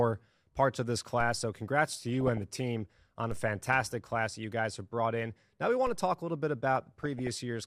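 At 1.21 s, after "parts of this", a DC step shifts the waveform's zero line, heard as one low thump that dies away through a 2 Hz high-pass. It is a single event, not crackle. DAB burbling follows from 2.03 to 2.61 s. Bit errors, at a rate of roughly half a percent, slip past error correction into the MP2 data and put short blips of noise in single sub-bands. The result is noise laid over the speech, not silent gaps. Further DC step thumps land at 3.31 s before "a fantastic" and at 5.87 s before "to talk a little". Briefer burbling comes at 4.31 to 4.44 s, and a longer stretch runs from 6.76 to 7.35 s.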